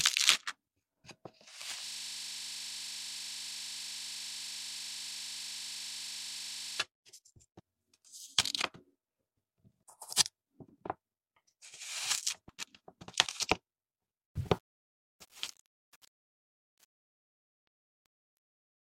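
From 1.87 to 6.8 s a rapid machine-gun stutter at 25 Hz repeats one 40 ms slice exactly: a system hang loop, with the hardware cycling a frozen buffer. From 14.27 s to the end, the fade-out turns gritty: truncation distortion on a fade, with the coarse steps fitting about 9-bit resolution without dither.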